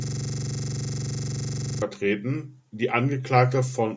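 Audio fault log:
0.00–1.82 s, system hang loop: the computer or its audio driver stalled, and the sound hardware kept replaying the same stretch of its ring buffer. A 42.67 ms slice of speech repeats exactly, some 42 times, at 23.4 Hz, which fits a 2048-sample buffer. At that rate the repetition blurs into a rough, rapid stutter bordering on a buzz. The loop is already running when the clip begins and breaks off at 1.82 s, when normal speech resumes.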